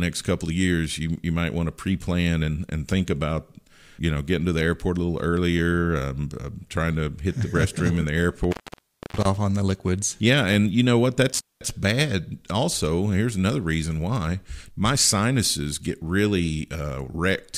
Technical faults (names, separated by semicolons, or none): intermittent contact